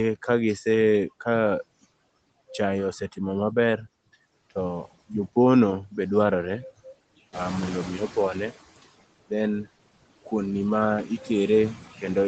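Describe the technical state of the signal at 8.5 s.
At 8.5 s you're right at the tail end of the noise suppressor catching up, which runs from 7.32 to 8.54 s. The room noise jumps by about 11 dB at around seven and a half seconds, and the suppressor's noise estimate is still tracking the old, quieter floor. So for about 1.2 s the background comes through with only about 10 dB knocked off. By 8.5 s it's sinking as the estimate settles.

Layered on that are the noise suppressor artifacts that run through the whole clip. The suppressor pulls noisy bands down frame by frame, by about 17 dB once it's settled. That makes the residual noise dip in the gaps between words and swell back up underneath them.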